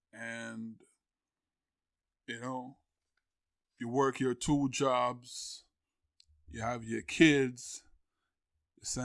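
No technical faults are audible anywhere in this speech recording.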